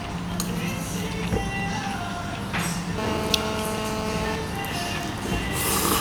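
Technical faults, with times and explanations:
2.98–4.36 s: GSM phone buzz. A nearby 2G phone transmits in bursts about 217 times a second, and the audio circuit rectifies each radio pulse. The result is a hard, raspy 217 Hz buzz rich in harmonics. It stays steady, as during a call, about 2 dB below the sound.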